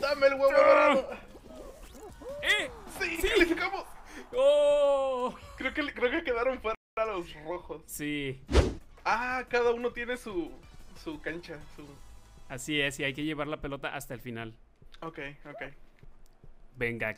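At 6.75 s the sound cuts to silence for about 0.22 s before resuming, a playback stall, likely from the player running short of data.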